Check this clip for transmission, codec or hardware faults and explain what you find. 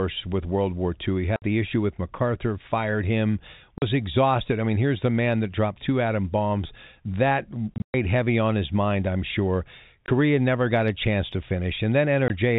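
Packet loss filled with silence breaks up the speech five times: 1.36 to 1.42 s, 3.78 to 3.82 s between "fired him" and "exhausted I mean here's", 7.74 to 7.94 s just before "heavy on his mind", 10.06 to 10.08 s between "his mind I'm sure" and "never got a chance", and 12.28 to 12.30 s. Missing packets were replaced with digital silence, leaving hard-edged dropouts. Every gap is a multiple of 20 ms, which points to 20 ms packets. Near 7.94 s, 160 ms of sound is lost in separate holes spread across 200 ms, and the longest hole lasts 120 ms. The telephone-band G.711 coding carrying the call adds little or no damage of its own.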